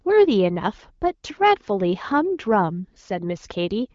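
No technical faults can be heard in this speech clip. The sound carries the mild coloration of the AMR wideband (HD Voice) codec, with speech detail up to about 6.4 kHz and shaped noise filling the band up to 7 kHz, which fits a rate around 12.65 kbit/s.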